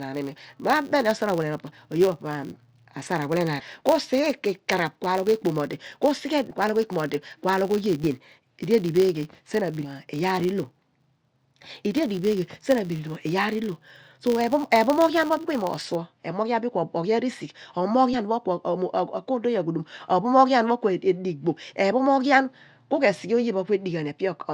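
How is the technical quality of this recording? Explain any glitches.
The recording has two technical faults.

From the start to about 15.96 s, a filter restarted on every block adds a steady buzz at 100 Hz. The filter loses its memory at each block boundary and begins again from silence. Each restart leaves a tiny transient, every 10 ms. Together these fuse into a buzz. It grows louder as the speech gets louder and fades in quieter passages. After about 15.96 s the buzz stops.

Compressed frames are skipped five times: at 3.59 to 3.64 s, 6.50 s, 8.03 s, 9.84 s, and 18.13 to 18.18 s. At each point, whole frames of the coded stream are missing or were rejected as damaged. The audio jumps forward by whole 10 ms frames. The jumps are roughly 150 ms, 150 ms, 70 ms, 200 ms and 70 ms of speech.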